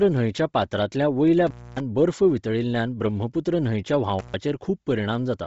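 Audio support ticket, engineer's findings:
Speech band dead above 7.7 kHz, all clip. Upper range grainy and breathy. Likely Bluetooth LC3 compression at low bitrate, near 24 kbps, short 7.5 ms frames. Encoder zeroes upper spectrum, fills gaps with noise. Heavy codec damage.

Intermittent contact. Dropouts at 1.47 to 1.80 s and 4.19 to 4.34 s. Line open about 0.26 s, then 0.13 s. Crackle at each edge. Loose cable or plug breaking the signal path momentarily.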